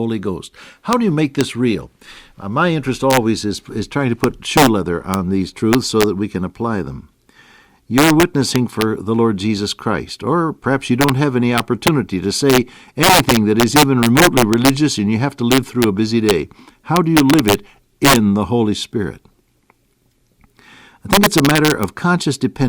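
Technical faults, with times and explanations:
Throughout, integer overflow: the speech is driven about 6 dB past the top of the integer range, and instead of being held at the limit, each peak that goes over wraps around to the opposite extreme. Roughly 0.7 percent of samples go over, and every loud peak snaps into a violent crack. Clipping would flatten those peaks into a buzzy, dull distortion; here the waveform jumps across its full range, so the cracks sound far sharper and more explosive.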